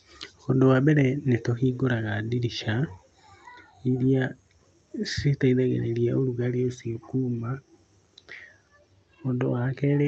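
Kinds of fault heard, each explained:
The speech shows no technical faults; it has passed through a WebRTC call path whose Opus coding keeps the audible band to about 8 kHz, as that path normally does.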